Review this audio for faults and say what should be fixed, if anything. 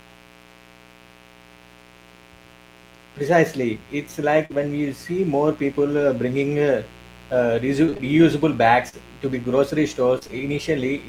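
A mains buzz runs under the whole clip, a steady raspy drone built on 60 Hz sitting roughly 25 dB below the speech. That rasp comes from sharp switching spikes, twice per mains cycle, leaking in through a dimmer, a rectifier or an unshielded run, so the harmonics climb well up into the kilohertz range rather than staying a clean hum. To prevent it, get the mic chain off dimmer circuits and use properly shielded, grounded cabling.

There's a short concealed packet loss from 4.45 to 4.52 s, where about 40 ms of audio never made it to the decoder. The receiver bridged the hole by carrying the last sound forward, pitched if voiced and as shaped noise if not, then blended back in, so you get a quick smear or wobble right there. A slightly deeper jitter buffer would give late packets time to arrive before concealment kicks in.

Lost packets rebuilt from error correction show up at 4.50 to 4.56 s, about 40 ms (which fits two 20 ms packets), and again at 5.92 to 6.02 s, about 60 ms. 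Nothing drops out, because the following packets carried low-bitrate copies that Opus in-band FEC played back. The rebuilt stretches just sound a bit rougher and noisier than their surroundings. Improving the network path so fewer packets need rescuing is the real fix, and keeping FEC on is worth it.

Repeated packet loss gives the robotic sound in two places. From 7.86 to 8.95 s there are five gaps, the longest 38 ms, with about a tenth of the span patched. From 10.19 to 10.30 s there are three gaps, the longest 26 ms, and about half of that short stretch is concealed. Each hole gets filled by extending the last sound, and the next one arrives before things settle, so it comes out choppy. Sorting out the congested or unstable link, for instance moving to wired or adding QoS, is what stops these bursts.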